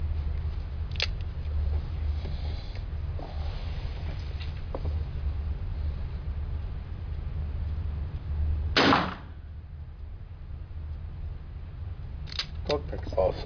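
No technical faults are audible anywhere in this audio.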